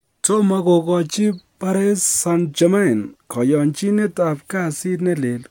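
No technical faults can be heard anywhere in the recording, and the signal stays steady and intact throughout.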